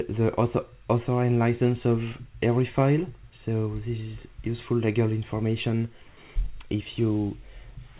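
Comfort noise in place of the background, 6.08 to 6.17 s: 90 ms of steady, featureless hiss, likely synthesised by the receiver while the sender paused transmission.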